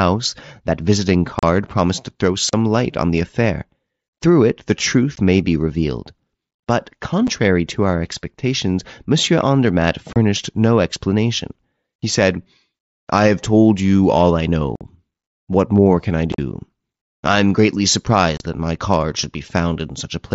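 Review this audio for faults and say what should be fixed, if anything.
Unconcealed Bluetooth headset packet loss punches holes in the speech at 1.39–1.43, 2.49–2.53, 5.16, 7.27, 10.13–10.16, 14.76–14.81, 16.32–16.39 (scattered, chopped) and 18.37–18.40 s. Lost headset packets were replaced by silence or an idle pattern, leaving gaps of 7.5 to 52.5 ms with abrupt edges. These show as gaps in the waveform, and as vertical stripes in the spectrogram. Enabling packet loss concealment on the headset link, and improving radio conditions or reducing interference, would prevent these dropouts.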